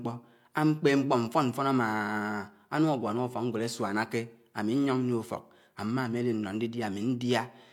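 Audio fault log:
No faults detected in this speech recording.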